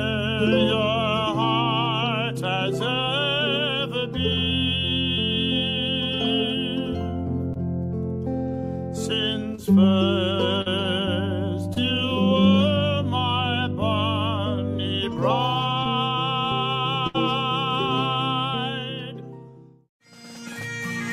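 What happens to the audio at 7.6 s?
Just before that point, from 7.53 to 7.57 s, there is a short concealed packet loss. About 20 ms of audio never arrived in time. The receiver extended the preceding sound to cover the gap and then blended back in. It is heard as a brief smear or wobble.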